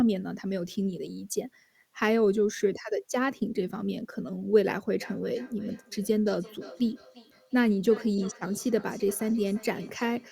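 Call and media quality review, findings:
Feedback echo between two devices, 5.0 to 10.31 s: speech returns at roughly 0.3 s intervals, peaking about 19 dB below direct level. Second device in same room replays far-end audio into this mic; local echo canceller cannot remove it.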